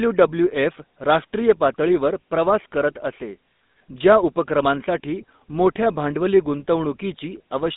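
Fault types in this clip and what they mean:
GSM full-rate codec: Pulse-excited vocal-tract model throughout, consistent with a 13 kbps stream; the speech is plainly buzzy and gravelly, confined to roughly 200 Hz to 3.7 kHz.
lost GSM frames: At 3.56 to 3.60 s, a 40 ms gap, which fits two dropped frames, is filled by repeating the last good frame, giving a brief rough, metallic ring.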